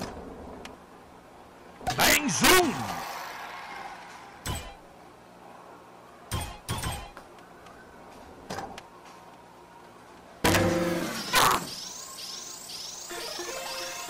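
Three bursts of integer overflow show up, from 2.00 to 2.60 s, 10.45 to 10.56 s and 11.36 to 11.55 s. In each, the level was pushed about 4 dB past full scale. Instead of being limited, the peaks wrapped around to the opposite extreme of the integer range. So rather than the flattened crunch of clipping, you get hard, violent cracks wherever the loud parts cross the limit.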